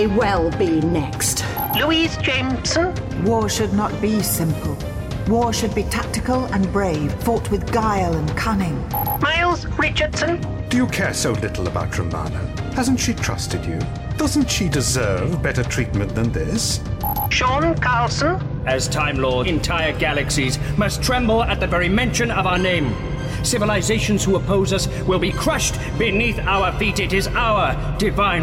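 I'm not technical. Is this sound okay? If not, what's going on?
No. At 7.1 s and 19.4 s, compressed frames were skipped: the player dropped damaged or missing chunks, so the sound jumps ahead a fraction of a second.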